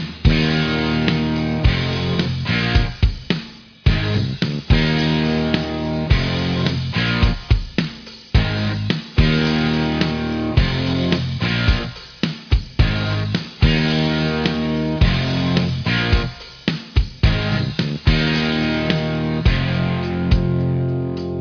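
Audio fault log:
No faults heard anywhere in this recording.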